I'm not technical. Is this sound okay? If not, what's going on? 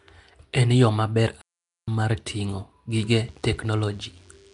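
No. There are three separate problems.

Throughout the clip the speech has a rough, hissy edge and a smeared, underwater quality, and the very top of the sound is missing, with nothing above about 10.6 kHz. This is most likely Nellymoser compression, the old Flash microphone codec. It squeezes audio by handing out a small, fixed budget of detail to each short block, so quieter parts of the sound get nothing and are filled in with noise.

From 1.41 to 1.88 s, right after "yo maber", the sound cuts out completely for just under half a second and then resumes with "mar ting'o". This is a playback stall. The player most likely ran short of data or was held up, so it fell silent until it could catch up again.

From 2.90 s, just after "mar ting'o", to the end, a faint, steady, thin buzz sits under the speech. It repeats 100 times a second and has a harsh, many-layered tone. This is DECT cordless phone buzz. 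A nearby cordless phone or its base station sends a brief radio burst every 10 ms, and the audio circuitry picks it up and turns it into an audible buzz.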